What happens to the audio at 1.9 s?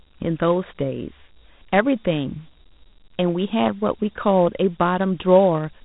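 At 1.9 s, as throughout, the speech is dull and gritty, with nothing above 3.9 kHz, from Dialogic VOX ADPCM coding: coarse 4-bit steps at about 32 kbps.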